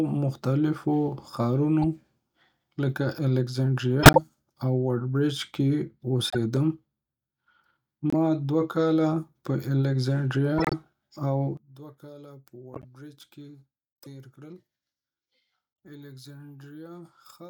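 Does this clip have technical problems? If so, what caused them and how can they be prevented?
Yes. Corrupt frame decoded: damaged compressed frames were decoded and played instead of being concealed. Their misread data put energy at the wrong frequencies, heard as short chirps and noise bursts at 1.82–1.85, 4.02–4.18, 6.25–6.37, 8.10–8.14, 10.58–10.73, 12.74–12.85 and 13.96–14.07 s. The burst at 4.02 s is loud, and the one at 13.96 s is barely audible. Checksum verification with concealment of failed frames prevents this.

One channel inverted: from 11.57 s to the end, one stereo channel likely has reversed polarity, so the centred speech cancels when the channels sum to mono. The speech drops by about 20 dB and only a faint remnant is left. Checking polarity on each channel path and monitoring in mono prevents it.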